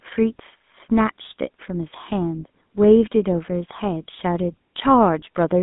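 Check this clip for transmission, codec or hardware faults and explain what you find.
One codec fault runs through the whole clip. The speech has been through the GSM full-rate codec. It models the vocal tract and excites it with a sparse, regular pulse train. Audio is confined to roughly 150 Hz to 3.6 kHz, which fits a 13 kbps GSM line. The voice sounds plainly buzzy and gravelly.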